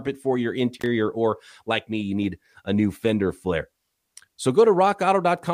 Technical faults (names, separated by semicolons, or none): intermittent contact